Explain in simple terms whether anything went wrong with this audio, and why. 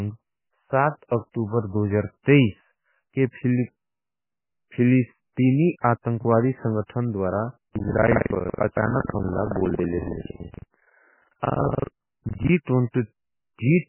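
Throughout, the speech sounds watery and muffled, with nothing above 3 kHz, which points to heavy damage from MP3 compression, likely at a very low quality setting.

From 7.66 to 12.52 s, right after "फिलिस्तीनी आतंखवादी संगठन द्वरा", buffer tearing adds a robotic 21.5 Hz buzz. Roughly a third of each 2048-sample chunk replays audio from about 150 ms earlier.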